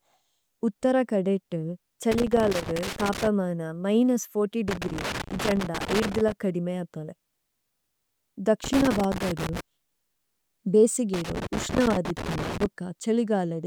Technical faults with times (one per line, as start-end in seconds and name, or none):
2.12-3.27 loose connector crackle
4.68-6.32 loose connector crackle
8.64-9.60 loose connector crackle
11.14-12.66 loose connector crackle